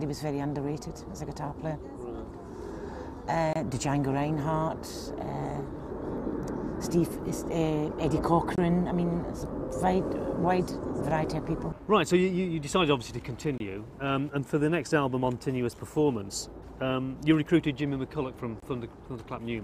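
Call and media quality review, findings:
Gap between chunks: four hard-edged dropouts of about 23 ms at 3.53, 8.56, 13.58 and 18.60 s, one per 5 s chunk. Probably the player starting each chunk late or codec padding at the joins. Nothing's lost, just silence inserted.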